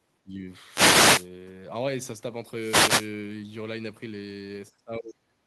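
A speech recording with two kinds of fault. From 0.24 to 0.41 s, and again from 4.71 s through the end at 5.47 s, the voice is turned down: the first dip is shallow, around 15 dB, while the second goes down by roughly 35 dB. This is speech suppressed in double talk, likely from an echo canceller that, with both ends talking at once, could not tell the near talker from loudspeaker echo and attenuated everything. Between 0.67 and 1.29 s and between 2.54 and 3.13 s there are wireless microphone noise hits, heard as a swish of static rising over the voice. An analogue FM radio microphone's signal faded as multipath reflections cancelled at the receiver, so receiver noise came up for over half a second each time.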